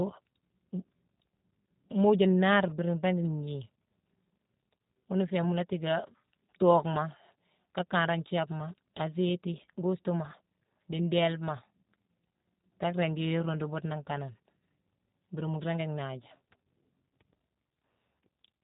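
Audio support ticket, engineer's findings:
G.729 codec, throughout. Band-limited speech, nothing above 3.8 kHz, so sibilants are dull and the sound is boxed-in. Plainly audible roughness and a synthetic edge on the speech, consistent with the decoder rebuilding each 10 ms frame from a vocal-tract filter, a pitch predictor and a few fixed pulses per half-frame instead of the actual waveform. Degree of damage fits an 8 kbit/s VoIP leg.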